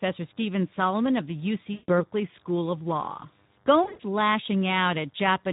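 It's a speech clip carrying Speex codec damage the whole way through: the voice sounds hoarse and grainy, with thin excitation and a noisy, smeared top end, which fits a low Speex setting around 11 kbps. There's also VoIP packet loss concealed by the speech codec, at 1.73–2.01 s and again at 3.83–4.01 s. In each gap the decoder stretches the last sound into a fading fill, covering what sounds like about 140 ms of missing audio. The second gap is broken up, with the longest stretch near 100 ms, and the voice stays weak for a moment after each one.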